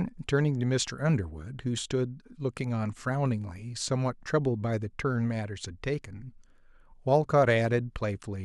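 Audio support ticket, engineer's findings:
Findings: no audio faults heard in this speech clip.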